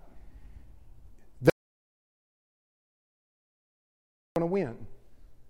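An audio dropout to silence runs from 1.50 to 4.36 s: the speech cuts off mid-flow and about 2.9 seconds pass in silence, with no room tone, before it resumes abruptly. The input was likely lost while recording continued writing silence.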